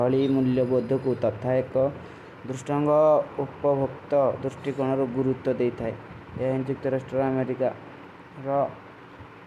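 No technical faults can be heard anywhere in this speech recording. There is nothing to place on a timeline, because no moment of the audio stands out as faulty.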